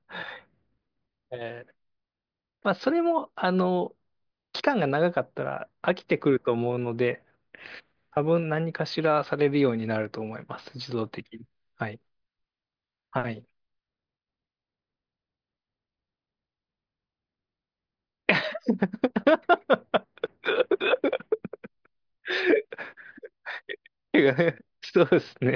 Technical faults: none

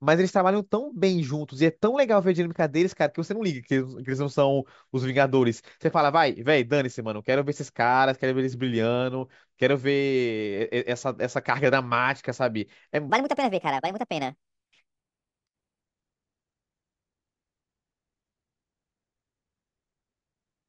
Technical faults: wrong sample rate

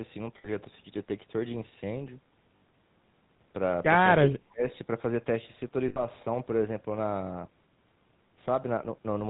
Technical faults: GSM full-rate codec; lost GSM frames; speech suppressed in double talk

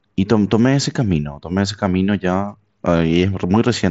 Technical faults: none

